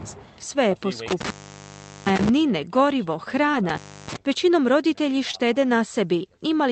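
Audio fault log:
1.08–2.29 s and 3.69–4.16 s, intermittent contact: A loose connection briefly opens. The speech cuts out for about 0.76 s, then 0.31 s, with crackle at each edge and faint hiss between.
3.51–3.55 s and 5.31–5.35 s, short concealed packet loss: About 20 ms never arrived in time. The receiver extended the preceding sound and blended back, leaving a brief smear or wobble.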